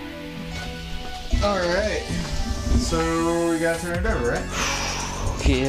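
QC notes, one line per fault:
Nothing to flag here; I couldn't hear a single problem worth noting anywhere in the clip.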